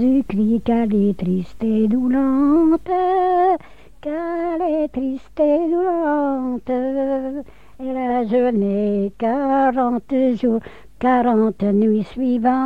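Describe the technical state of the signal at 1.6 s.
At 1.6 s the signal is intact, with no audible fault at that moment.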